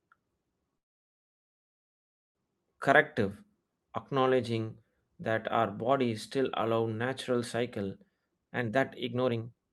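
Speech carried over an Opus call path whose audio tops out near 12 kHz has two faults. From 0.77 to 2.37 s a call audio freeze inserts a 1.58 s gap, almost entirely silent, likely from delayed packets draining the jitter buffer; speech then resumes with nothing lost. After "still allow natural cycle", from 8.17 to 9.71 s, a jitter buffer speed-up trims pitch-period slices, running speech at about 149% with unchanged pitch and removing roughly 0.7 s.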